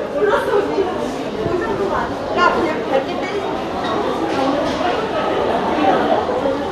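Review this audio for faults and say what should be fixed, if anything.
At 1.28 s the audio jumps forward. Compressed frames were skipped there. Whole frames never reached the output, either missing from the file or rejected by the decoder as damaged. Roughly 50 ms of sound is lost. That gap fits about two frames of around 26 ms each. To prevent it, verify file integrity after transfer and re-encode or re-fetch from an undamaged source.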